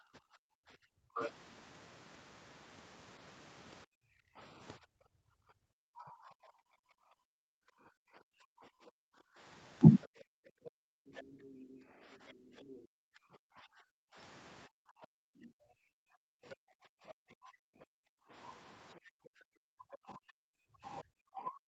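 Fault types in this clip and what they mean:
Speech suppressed in double talk: the talker's speech repeatedly sinks by around 40 dB or cuts out in pieces, across long stretches from the start to the end of the clip. This is likely an echo canceller turning down both sides while they overlapped.
Other side's voice leaking through: a second, quieter voice, roughly 15 dB below the talker, slips in as brief scraps and one stretch of about two seconds. This is likely loudspeaker echo that the echo canceller failed to remove from the microphone.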